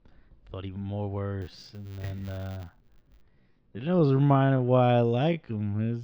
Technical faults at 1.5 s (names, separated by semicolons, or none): time-stretched section; filter restarted on every block